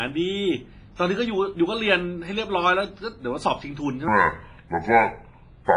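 Throughout, heavy damage from what is likely WMA compression, fitting a low bitrate near 24 kbps, leaves the speech washy and ringing, with nothing above 10.5 kHz. At 0.95 to 0.99 s, pre-echo: the codec spreads noise across its block, so about 33 ms of hiss precedes an attack, smearing it. From 4.08 s to the end, a section at the wrong speed plays at 0.628 times normal rate, dropping pitch by about seven semitones and making speech deep and slow.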